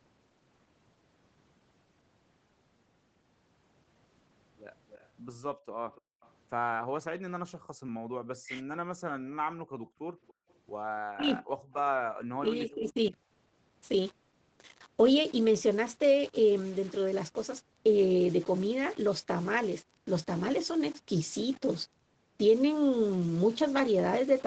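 A speech recording carried over a call, with the band ending at 8 kHz as the call path allows. Two faint delayed copies of the voice appear, from 4.9 to 6.31 s and from 9.85 to 10.53 s. Each trails the original by 286 ms and sits roughly 30 dB below it. This is an echo leak. The likely cause is a far-end loudspeaker whose echo canceller let part of its microphone pickup through and sent it back. The room background is gated by the echo canceller three times: 5.55 to 6.21 s, 7.59 to 8.15 s, and 9.56 to 10.48 s. In each, the ambience falls away by up to about 40 dB and then returns. The drops last under half a second in the first two spans and close to three quarters of a second in the third. The canceller is clamping the microphone while the loudspeaker plays. The main voice itself dips three times: 8.43 to 8.6 s, 11.16 to 11.43 s, and 12.37 to 13.14 s. The first dip is the deepest, near 40 dB, and briefly cuts the voice out. 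The other two are shallower, around 20 dB, and the last stretches to well over half a second. This is speech suppressed in double talk. It points to both sides talking at once, with the canceller unable to tell the local talker from the echo and turning both down.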